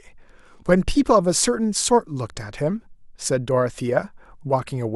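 Nothing in the recording stood out as a technical problem on listening.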